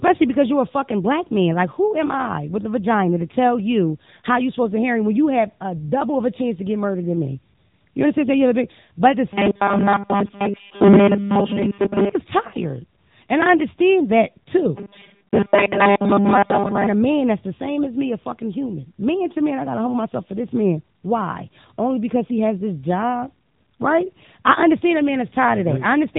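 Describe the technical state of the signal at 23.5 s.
At 23.5 s you're hearing the AMR narrowband mobile codec that runs through the whole clip. Speech is rebuilt from a vocal-tract model with pitch prediction and sparse pulses, so it sounds plainly buzzy and synthetic. Nothing above 3.8 kHz survives, and the rate points to roughly 8 kbps.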